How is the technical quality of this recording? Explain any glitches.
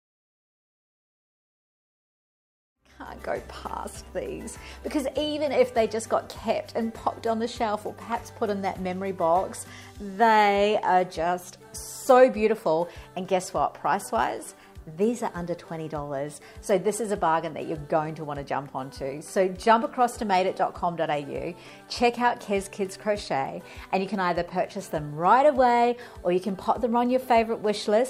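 No technical glitches can be heard in this recording, and the only change in level is a smooth, deliberate fade-in from around 3 s that reaches full level by 3.32 s with no click or hard edge.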